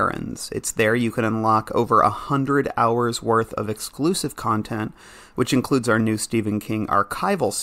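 No technical faults can be heard anywhere in the recording; the signal holds steady throughout.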